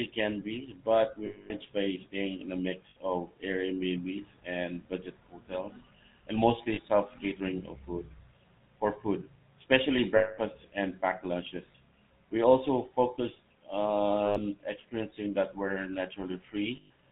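GSM full-rate codec damage runs through the whole clip of speech. The codec describes the voice as a vocal-tract filter excited by a regular pulse train, discarding two of every three excitation samples, and passes nothing above 4 kHz. The result is a plainly audible buzzy, gravelly roughness and a dull top end, which fits the 13 kbps full-rate coder.

Lost GSM frames occur at 1.26 to 1.52 s, 2.90 to 2.96 s, 6.74 to 6.80 s, 10.16 to 10.39 s, 11.72 to 11.75 s, 14.26 to 14.39 s and 16.76 to 16.90 s. In each gap the decoder reuses the last good frame's settings, so the sound is held as a rough, metallic ring rather than dropping out. The longest gaps, at 1.26 s and 10.16 s, last 240 ms and 220 ms.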